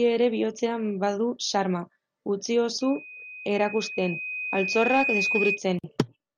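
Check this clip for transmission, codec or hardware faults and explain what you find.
One fault is present: loudspeaker feedback squeal from 2.81 s to 5.62 s. The microphone is picking up the loudspeaker it drives, and at 2.5 kHz the loop gain around that path exceeds one, so that frequency keeps recirculating and growing on its own. It is heard as a single high tone that swells over about two seconds into a steady squeal, ending up roughly as loud as the speech itself.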